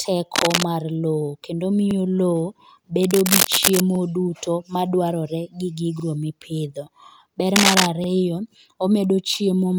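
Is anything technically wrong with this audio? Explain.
Yes. Rustling, scratchy bursts sit over the speech at 0.35–0.63 s, 3.03–3.80 s and 7.56–7.91 s, roughly as loud as the speech and louder in the last. This is cable scratch noise, likely from a worn cable or connector whose contact shifts as it moves.

Brief stutters occur at 1.91, 3.95, 6.00 and 8.04 s, each replaying 44 ms. These are overlapping chunks: audio handled in 2 s blocks where each block starts before the previous one ends.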